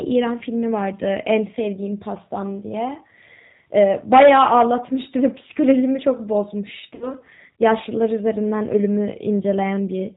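Speech, run through what sounds like the G.729 codec at 8 kbit/s the whole way: everything above 4 kHz is gone, and the voice has that slightly rough, synthetic edge you get when a codec rebuilds it from a vocal tract filter, a pitch predictor and a few pulses per frame. From 3.77 to 4.62 s there's hard clipping, driven about 11 dB past full scale. The peaks get sliced flat, so the loud stretches turn into harsh fuzz from the extra high harmonics. Then at 6.95 to 7.13 s you hear VoIP packet loss concealed by the speech codec. About 60 ms of audio went missing, which fits three 20 ms packets. The decoder fills the gap by stretching its last pitch and filter into a fading buzzy tone or coloured noise, and the voice stays weak and smeared for a moment after the stream comes back.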